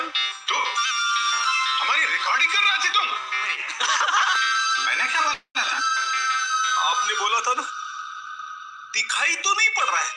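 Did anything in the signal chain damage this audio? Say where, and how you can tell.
Yes, at the network. A call audio freeze from 5.33 to 5.57 s: a fading buzz or hiss, brief silence, then the sound resumes intact. Likely late packets emptied the jitter buffer.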